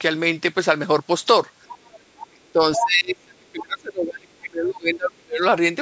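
From 1.68 to 2.0 s, and again from 2.17 to 2.27 s, you can hear the other side's voice leaking through. It sits well below the main talker, a faint second voice in the background. The likely cause is a loudspeaker on the talker's end feeding the far side back into the mic, with the echo canceller not catching all of it. A third burst at 2.75 to 2.86 s is much stronger, nearly as loud as the talker.

Right around those leaks the talker gets hit by speech suppressed in double talk: first from 2.29 to 2.6 s, then for a long stretch from 2.77 to 5.43 s. The voice ducks hard, with some drops going very deep. It likely happened because both sides were talking at once, and the canceller couldn't tell its own talker from the echo, so it pulled both down. The second stretch adds up to roughly three seconds of dipping speech. The call's mic processing stops everything above 8 kHz, which is just the normal band of that path.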